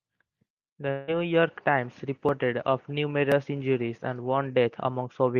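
The clip is speech with a long network dropout from 0.91 to 1.11 s. The sound stops arriving there. In its place is a continuation of the last sound, as a buzz or hiss, that fades over about 160 ms. No true silence is heard before the speech resumes. About 160 ms of the original audio is simply gone, so the speech jumps ahead. The likely cause is a break in packet delivery covered by the receiver's concealment.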